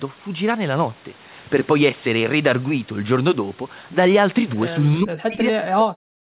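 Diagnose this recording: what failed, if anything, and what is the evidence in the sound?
From 5.0 s to the end, the speech sinks sharply, falling by roughly 40 dB. The stage is call processing: likely speech suppressed in double talk, with the echo canceller treating overlapping far-end sound as echo and muting the talker.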